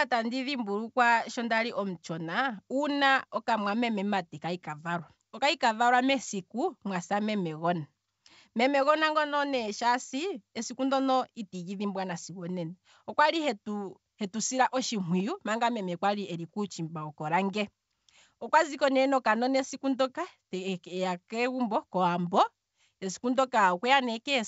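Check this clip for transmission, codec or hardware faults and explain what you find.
Nothing stood out on listening to this speech clip, which carries the light upper-band hiss expected of G.722 wideband telephone coding at 64 kbit/s.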